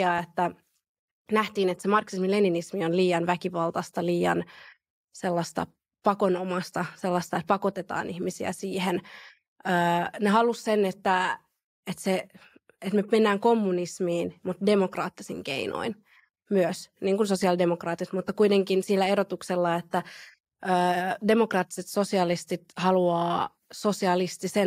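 No technical faults are audible.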